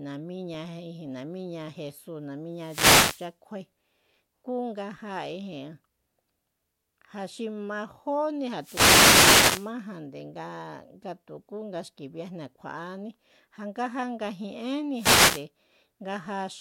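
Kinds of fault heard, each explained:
Wireless microphone noise hit: the analogue FM link fades as reflections cancel, and receiver noise swells over the speech as static bursts at 2.54, 8.58 and 14.94 s, each under 1.2 s, seen as broadband hiss smears on a spectrogram and a thickened waveform floor.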